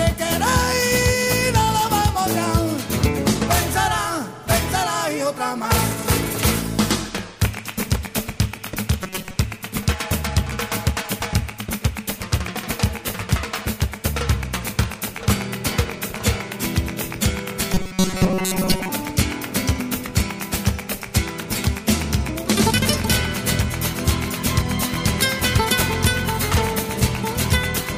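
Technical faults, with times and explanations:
9.03–9.37 s and 17.73–18.89 s: robotic sound from repeated short buffers. Both stretches go stiff and metallic with a fixed 188 Hz buzz, likely because audio arrived too seldom and a chunk of about 5.3 ms was replayed for most of each stretch.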